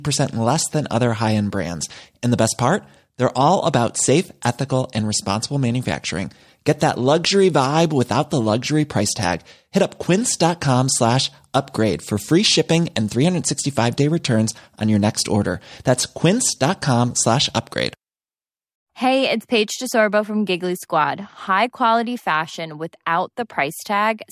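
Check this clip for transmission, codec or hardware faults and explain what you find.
No transmission, codec or hardware faults turn up in this speech clip.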